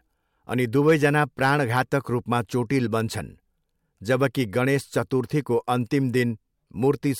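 Speech clip with hard clipping from 0.88 to 1.81 s. Driven about 5 dB past full scale, peaks are cut flat, adding crackle on peaks.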